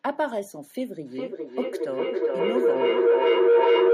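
Speech, with a feedback howl from 1.06 s to the end, peaking about 10 dB above the speech. Two devices sharing one room and one call form a loop from microphone to loudspeaker and back that gains level on every trip, so the repeats grow and narrow to a tone around 500 Hz, with the loop repeating roughly every 0.4 s. Echo would decay with each return; this swells and sustains until the loop is broken.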